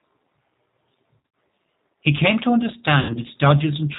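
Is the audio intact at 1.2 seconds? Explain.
No. Around 1.18 s there is VoIP packet loss concealed by the speech codec. About 140 ms of audio is missing across a 160 ms stretch, with the longest gap 80 ms. The decoder keeps repeating its last pitch and filter at falling gain. This smears the sound into a buzzy tone or coloured noise that fades, and it stays weak briefly afterwards.

The G.729 codec is also plainly audible here, as it is throughout. At 8 kbit/s it rebuilds the sound from a filter, a pitch predictor and a few pulses per frame. It passes nothing above 4 kHz, leaving the speech muffled, rough and slightly synthetic.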